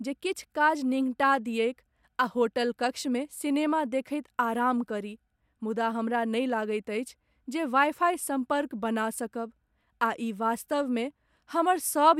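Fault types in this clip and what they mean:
No faults detected; the speech runs without any audible technical defect.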